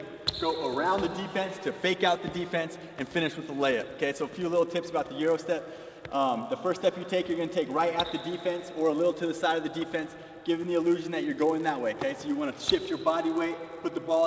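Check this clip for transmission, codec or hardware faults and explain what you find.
There is one fault, present from start to finish: a resampler restarted on every block. The conversion, which sounds like 44.1 kHz down to 16 kHz, treats each 10 ms block in isolation, so every block edge is computed against wrong neighbouring samples. Those edge errors repeat 100 times a second, giving a buzz at 100 Hz that rides on the sound and stops in silence. Unlike mains hum, it exists only when signal is present and keeps exactly to the block rate.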